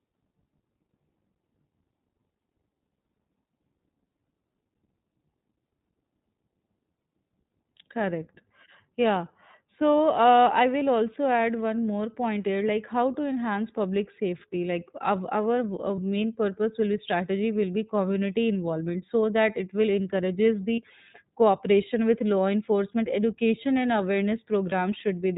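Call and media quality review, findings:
iLBC codec across the whole speech track: band-limited, nothing above 4 kHz, with a rough, slightly synthetic edge that's plainly audible. The character fits iLBC's 15.2 kbps mode with 20 ms framing. Each frame's excitation is coded on its own, with no carry-over from the last. Muffled top end from the narrowband limit.

Lost iLBC frames, four short gaps, each heard as a brief held, buzzy vowel where the decoder repeats the last pitch cycle with noise mixed in:
10.38 s, right before "I will also add", about 20 ms, fits one lost frame.
15.96–16.00 s, before "purpose will be strategy", fits one frame.
20.75–20.79 s, between "that it will encourages" and "cooperation with law enforcement", about 40 ms, fits two frames.
24.70–24.74 s, fits one frame.
Quick recovery each time, since frames decode independently.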